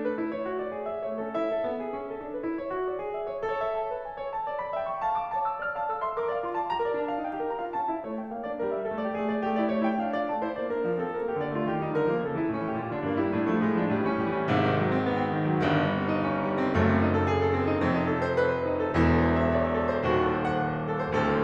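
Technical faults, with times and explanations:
No technical faults are present in this music clip.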